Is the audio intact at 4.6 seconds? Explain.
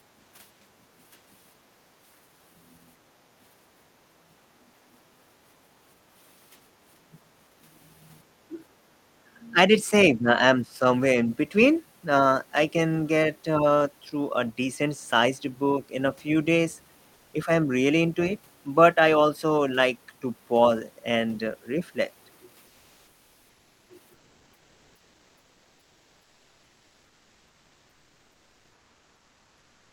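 No. From 4.03 to 4.71 s the background is gated by the echo canceller: while the loudspeaker played, the canceller pulled the microphone down by up to about 13 dB, so the room sound dips for roughly half a second. Unlike a dropout, it doesn't fall to silence, and it recovers once the canceller releases.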